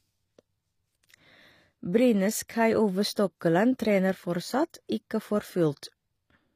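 From start to finish the speech has gritty, metallic sibilants and a treble that sounds synthetic, with nothing above 15.5 kHz. This is likely HE-AAC compression, rebuilding the upper band from copied lower harmonics, which fits a low bitrate around 24 kbps.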